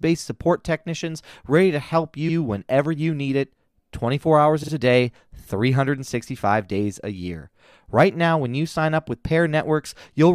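At 2.28 s, just after "technicians ready to help" and before "whenever you need it", a 70 ms block plays twice. At 4.62 s, just before "a day", a 46 ms block plays three times. These are repeated frames: the same stretch of compressed data was decoded again, which fits runs of three and two frames. Each repeat is heard as a stutter. Unlike an echo, nothing decays, and unlike a dropout, time is added rather than lost.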